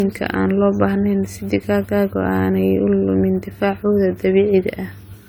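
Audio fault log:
throughout, generation loss: the speech has likely been through repeated lossy encoding, about four passes of an AAC-style codec at a rate that sounds near 64 kbit/s. Each pass requantises on a shifted frame grid, so the errors pile up. The result is a swirly, hollow, smeared texture, worse than one encode at that rate would give, with consonant attacks blurred, even though content still reaches up toward 20 kHz.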